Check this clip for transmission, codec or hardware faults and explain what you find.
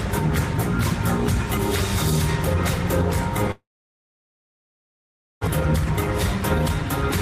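One fault stands out, a break in the sound from 3.51 to 5.49 s, likely a long network dropout. Audio stopped arriving, so the receiver stretched the last sound into a brief fading buzz or hiss, then held near-silence for about 1.77 s. Playback resumes with roughly 1.12 s of material lost and the timing shifted by around 0.7 s. A spectrogram shows a short smeared band fading into an empty stretch. The waveform flattens before restarting abruptly.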